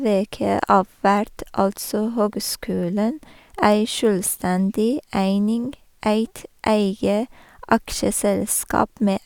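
Speech recording with no audible technical faults.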